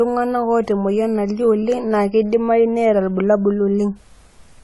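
Throughout, the speech sounds dull and smeared, with nothing above 11.5 kHz. The likely cause is AAC compression at a bitrate that fits AAC-LC around 32 kbps.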